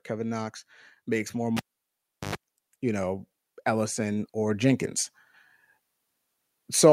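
Cable pulled and plugged in from 1.57 to 2.35 s, right after "makes more": a pop, 0.73 s of near silence, then a 0.1 s burst of 50 Hz mains buzz as the plug's tip touches, and a second pop when the speech returns.

Automatic gain rising from 3.64 to 4.91 s: the gain control judged the input too quiet and raised it by about 4 dB, so speech and background swell together.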